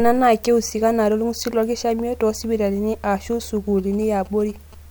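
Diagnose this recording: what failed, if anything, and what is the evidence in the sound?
GSM signalling bursts got into the analogue wiring. From 3.79 to 4.75 s, a galloping dit-dit-dit of short 217 Hz buzzes sits roughly 25 dB below the speech. A nearby 2G phone was signalling. The circuit rectified its radio bursts into audio.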